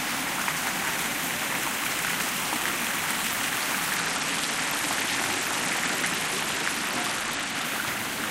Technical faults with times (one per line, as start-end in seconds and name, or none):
3.96-7.65 Bluetooth SBC bit pool drop